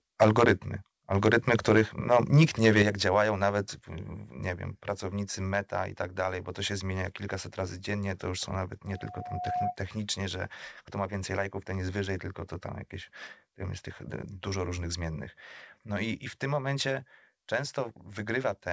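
From 1.25 to 1.81 s and 2.12 to 2.82 s, the loudest speech peaks turn harsh and crackly, flat-topped by about 5 dB and 4 dB. This is likely microphone overload at the converter, not codec roughness. At 2.82 s and 3.84 s, voice and background drop together in single steps of about 7 dB and 4 dB. That is the microphone volume stepped down, likely by the call software, rather than a gradual fade. From 8.87 to 9.77 s, a loudspeaker feedback squeal at 724 Hz swells over roughly 0.7 s to about 5 dB above the speech. Its growth marks it as a loop, not a steady interfering tone.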